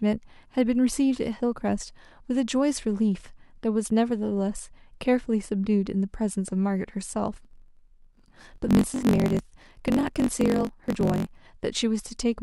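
A speech clip with a block size mismatch (truncated) from 7.32 to 11.39 s. Over that stretch a steady buzz sits under the speech at about 47 Hz. The speech also runs fast, about 1.12 times normal speed, yet keeps its natural timbre. One stage hands over longer blocks than the next one takes in. The tail of each block is dropped, and each cut adds a click at the block rate. The rate fits a 1024-sample read.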